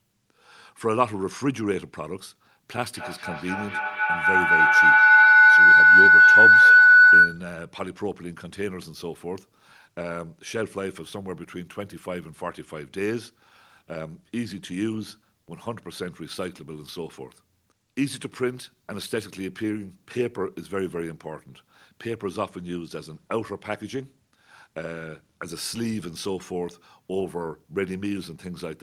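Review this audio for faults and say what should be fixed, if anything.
Feedback howl, 2.76–7.56 s: a loop between two devices in the room grows a tone near 1.5 kHz that repeats about every 200 ms and peaks about 15 dB above the speech. A spectrogram shows a bright horizontal line, and the waveform swells. To prevent it, mute one device or use headphones when two join from one room.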